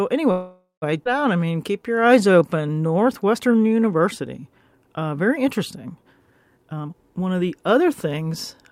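From 0.31 to 0.84 s the sound stalls: the last sound is stretched into a fading buzz that sinks to silence for its final 0.15 s or so, then resumes where it left off. This is a call audio freeze, likely from packets held up in transit until the jitter buffer ran dry. The stall inserts about 0.51 s of filler and removes nothing.

At 1.04 to 1.07 s playback skips ahead, joining the two sides with only a 14 ms bridge just before "out I". Roughly a third of a second of audio is lost, consistent with a stretch dropped in transit or discarded when the buffer overflowed.

From 1.34 to 3.83 s, just after "out I", a jitter buffer slow-down plays the speech at 88% speed without changing its pitch. Sounds become drawn out as single pitch periods and pause fragments are repeated, adding 0.31 s to rebuild a reserve.

From 6.56 to 8.69 s a jitter buffer speed-up runs the speech at 123% of normal rate, again at the same pitch, so it sounds hurried. 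Short pitch-period pieces are cut repeatedly, trimming roughly half a second to bring an overfilled buffer back to its target delay.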